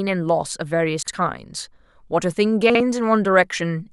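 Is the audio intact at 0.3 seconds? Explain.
Yes, the audio is intact at 0.3 seconds, with no audible fault at that moment.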